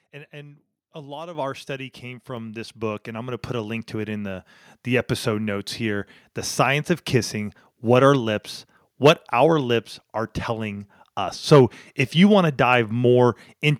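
At 1.35 s, right after "and a lot of", the microphone volume steps up by about 9 dB, then again at 2.37 s after "of our study came", by about 4 dB. The input gain was raised abruptly, so speech and background jump louder together mid-sentence.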